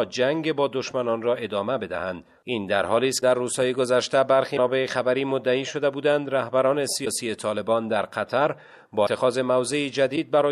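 Broken MP3 bit reservoir glitches appear at 3.20, 4.56, 7.04, 9.05 and 10.15 s, each a roughly 30 ms jump with a brief chirp, noise burst or gap. This likely arises where frames went missing: the following frame, about 26 ms long, fetched borrowed data from the wrong bytes.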